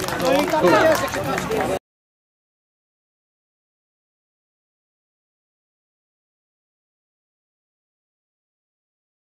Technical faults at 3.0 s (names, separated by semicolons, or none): wrong sample rate